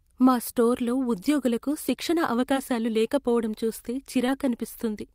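Speech clip with short concealed packet loss at 4.27–4.30 s, just after "లేకపోవడం చూస్తే": about 20 ms went missing, and the decoder extrapolated roughly 12 ms, leaving a brief smear.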